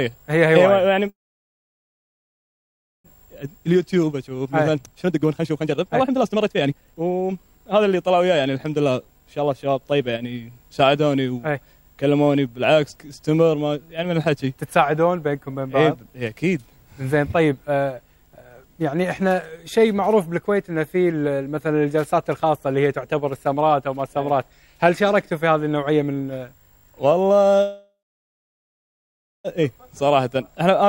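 At 1.09 s the audio stops. A brief trace of the last sound fades, then nearly two seconds of silence follow until 3.07 s. This is a call audio freeze. The likely cause is packets held up in transit, so the receiver's jitter buffer ran dry. Nothing is lost. The sound resumes exactly where it halted, now running about 1.95 s behind.

From 3.15 s to 10.0 s comes a jitter buffer speed-up. The receiver trims tiny pitch-period slices, again and again, to shed the built-up delay. Playback runs at 128% with the pitch unchanged. It sounds rushed. Roughly two seconds are cut away.

A second call audio freeze runs from 27.62 s to 29.47 s. It is about 1.83 s long, mostly silent, with a short fading tail at the start. Again the sound picks up where it stopped.

Another jitter buffer speed-up follows from 29.63 s to 30.84 s. This one is milder, at 107%, and removes about a tenth of a second.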